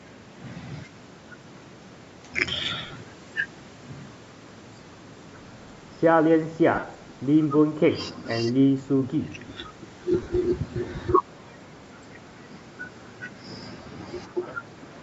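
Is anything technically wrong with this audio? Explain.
Yes. The speech has four short dropouts from lost LE Audio frames, at 2.86 to 2.93 s, 6.75 to 6.83 s, 10.23 to 10.27 s and 13.82 to 13.86 s. The first two are clusters of gaps, about 52 ms lost over 60 ms and 67 ms over 75 ms, with runs of roughly 40 and 50 ms. The later two are 37.5 ms gaps, which fits a few 7.5 ms frames going missing. The LC3 decoder conceals each gap by repeating the last spectrum with randomised phase, so the sound smears into a brief noisy buzz and begins to fade during the longer runs. The band stopping at 8 kHz comes from the call's microphone processing. The 7.5 ms spacing points to the Bluetooth LC3 link as the likely cause of the frame loss.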